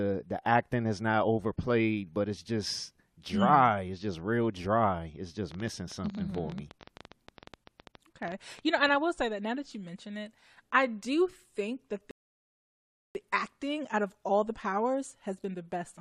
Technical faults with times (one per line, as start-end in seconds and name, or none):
5.52-8.95 train of clicks
12.11-13.15 rebuffering stall